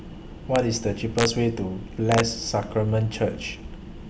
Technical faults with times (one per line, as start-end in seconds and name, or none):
0.56 integer overflow
1.19-1.25 integer overflow
2.12-2.20 integer overflow